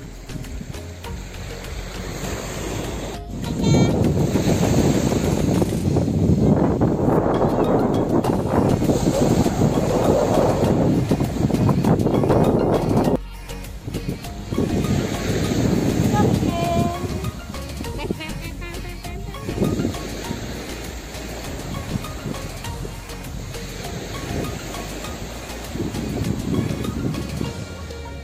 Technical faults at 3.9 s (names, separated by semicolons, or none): none